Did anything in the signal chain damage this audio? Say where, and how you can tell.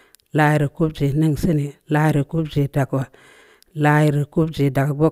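No, nothing in the chain has audibly damaged this speech recording; the signal holds steady and continuous at every stage from capture to playback.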